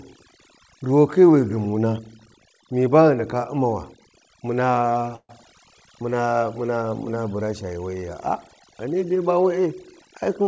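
Throughout the clip, overdone noise removal is at work: a noise reduction stage set too aggressively cuts individual frequency bands whenever they sit near its noise estimate, taking the softer parts of the speech with them. The background drops and breaks up into twinkling specks, and the speech has nothing above 8 kHz, which fits a G.722 call path.

From 5.16 to 5.32 s a call audio freeze occurs, most likely because packets were delayed and the jitter buffer ran dry. The last sound is stretched into a fading buzz or hiss that settles into about 60 ms of silence. Playback then resumes where it stopped, so nothing is lost, but everything after it arrives about 130 ms late.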